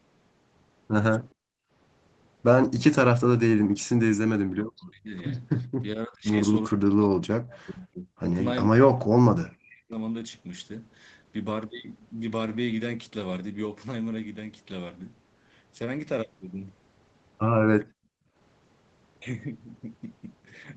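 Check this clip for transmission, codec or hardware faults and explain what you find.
Three kinds of fault are audible, all tied to echo cancellation on a speakerphone-style call. The audio reaches only about 8 kHz and carries the usual coding noise of an Opus call link.

Background gated by the echo canceller, at 1.34 to 1.71 s and 17.85 to 18.35 s: the room tone behind the speech drops sharply, by about 38 dB, for roughly 0.4 and 0.5 s respectively, then comes back. While far-end audio was playing through the loudspeaker, the echo canceller clamped the microphone path hard, taking the ambient floor down with it. The effect is a brief hole of near-silence before the background resumes.

Speech suppressed in double talk, at 4.48 to 5.14 s, 5.8 to 6.35 s, 6.68 to 8.24 s and 8.65 to 9.97 s: the speech repeatedly sinks or cuts out in pieces. The drops reach around 40 dB, apart from the 5.8 s stretch at around 30 dB. 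The longest spans are about a second and a half. The likely cause is both sides talking at once, so the canceller could not tell the local talker from loudspeaker echo and suppressed both.

Echo leak, at 7.49 to 7.61 s: a faint delayed copy of the speech appears roughly 417 ms behind the original and sits about 25 dB below it. It is heard as a short scrap inside the suppressed stretch. The likely source is loudspeaker audio reaching a microphone whose echo canceller failed to remove all of it, so a residue was sent back down the call.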